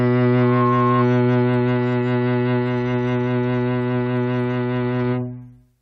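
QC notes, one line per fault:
0.37–1.06 s, loudspeaker feedback squeal: a single 1.1 kHz tone swells out of the music over roughly a third of a second and peaks about 5 dB above it. That self-building rise marks a mic-to-speaker loop, not a steady interfering whistle.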